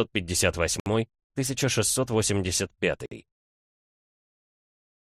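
At 0.80 s the sound stops dead for about 63 ms, then again at 3.06 s for about 55 ms. Each is a gap at a join of encoded pieces: separately encoded sections were spliced untrimmed, so one section's padded final frame and the next one's leading encoder delay both remain as silence. Unlike a dropout, nothing is lost. The sound resumes exactly where it left off, with softened edges around each hole.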